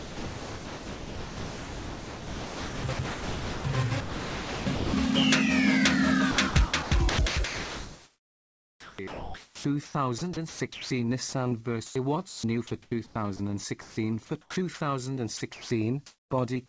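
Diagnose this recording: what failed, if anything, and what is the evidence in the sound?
Sound chopped by the voice detector, likely in call processing. In 0.0–4.93 s, 6.31–11.32 s, 11.86–14.80 s and 15.37–16.30 s, real sound keeps giving way to smooth comfort noise. Sending gates on and off.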